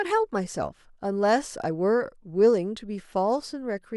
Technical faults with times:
none

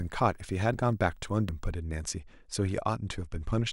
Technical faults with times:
0.00-1.72 video or display buzz
0.74 dropped buffer (overrun)
1.49 dropped buffer (overrun)

